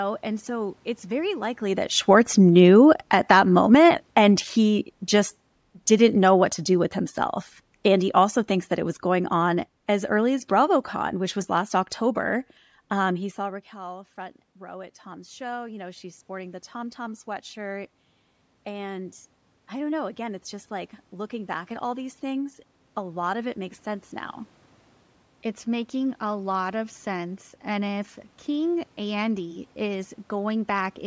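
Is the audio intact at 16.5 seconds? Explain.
No. At 16.5 s the sound is inside an automatic gain rising episode running from 13.73 s, just after "he saw", to 23.83 s, before "sense now". The input level fell by about 17 dB, so the control slowly raised gain by about 11 dB, swelling voice and background noise together.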